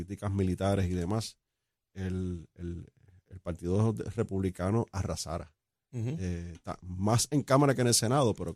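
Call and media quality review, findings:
No faults found on the speech path, with level, continuity and timing holding steady throughout and nothing for the call or media chain to answer for.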